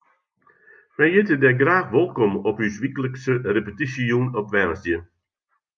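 Nothing in this speech recording stands out as a technical problem; there's no moment where the sound slips, breaks up or jumps.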